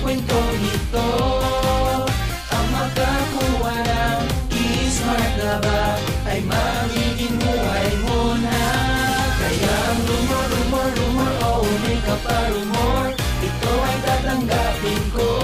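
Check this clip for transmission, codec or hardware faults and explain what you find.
No faults turn up anywhere in the clip.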